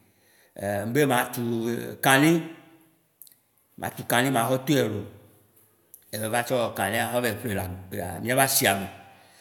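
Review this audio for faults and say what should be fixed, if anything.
No faults found in this speech recording; nothing needs fixing.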